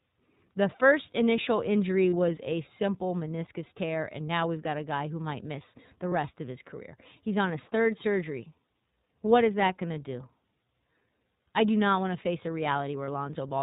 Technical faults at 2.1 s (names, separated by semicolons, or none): iLBC codec; lost iLBC frames